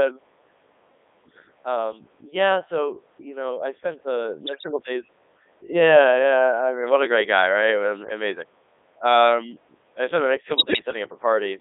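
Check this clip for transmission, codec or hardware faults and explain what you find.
Two faults are present: heavy vocoder damage throughout, and two bursts of bit errors.

Codec 2 vocoder, throughout: speech is rebuilt from pitch, voicing and spectral-envelope parameters as sine waves, fitting the 3.2 kbit/s mode and band-limited to 300 Hz–3.6 kHz. It sounds robotic and buzzy.

Bit errors on digital voice radio, at 4.44–4.71 s and 10.56–10.82 s: corrupted bits scramble whole frames' pitch, level and spectrum, causing warbles, bleeps and gibberish. The second burst has a higher bit error rate, roughly 7% against 4%.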